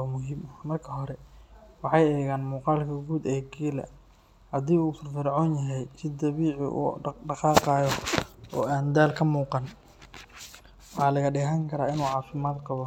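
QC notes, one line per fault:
Nothing to flag here; the speech runs along with no technical faults to note.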